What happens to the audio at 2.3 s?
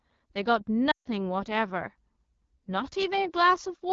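At 2.3 s you're hearing the AMR wideband (HD Voice) codec at work, and it runs through the whole clip. The speech sounds rough and raspy, which points to one of its lowest rates, around 8.85 kbit/s. Too few bits go to the pulse-driven vocal tract model below 6.4 kHz, and the top band up to 7 kHz is only filled with shaped noise.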